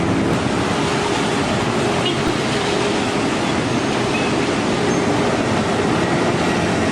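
A repeated buffer fault occurs at 2.28 s. A tiny slice of audio, roughly 3 ms long, is played back-to-back several times with a hard edge at each join, which fits a 128-sample buffer being replayed when fresh data failed to arrive. Because the slice is so short, the repeats fuse into a brief click or buzz rather than an audible stutter, and around 10 ms of the original sound is lost.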